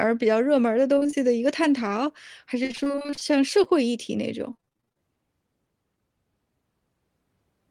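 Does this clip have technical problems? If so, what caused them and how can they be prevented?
Yes. Repeated packet loss (robotic sound) occurs at 0.95–1.20 s, 2.63–3.32 s and 4.53–4.99 s. In each stretch, about half the speech was lost in gaps of up to 30 ms, each filled by extending the previous sound, so the speech turns choppy and robotic. A more stable network path with forward error correction and a deeper jitter buffer prevents this.

Short concealed packet loss occurs at 3.64–3.67 s, where about 20 ms never arrived and the receiver bridged it by continuing the preceding sound before blending back, leaving a brief smear. Reducing network congestion or enabling redundancy in the codec prevents such single losses.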